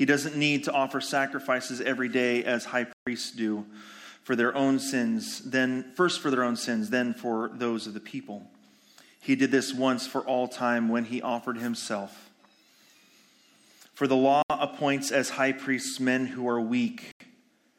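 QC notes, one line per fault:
2.93–3.07 s, 14.42–14.50 s and 17.12–17.20 s, Bluetooth stall: the sound drops to dead silence for 138 ms, 73 ms and 87 ms, then resumes. This is likely the headphone buffer running empty while wireless packets were held up and resent. Unlike a codec dropout or edit gap, there is no warble or smeared transient, just a brief clean pause.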